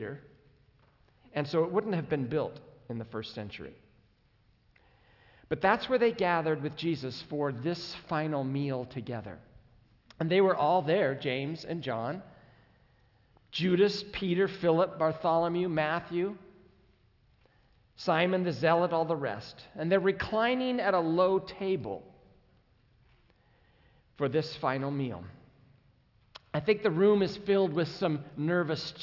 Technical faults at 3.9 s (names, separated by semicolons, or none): none